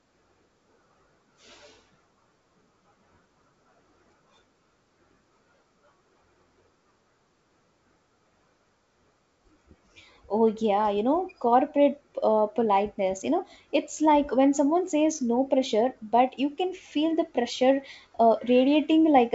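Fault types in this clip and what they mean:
No faults are audible anywhere in this speech.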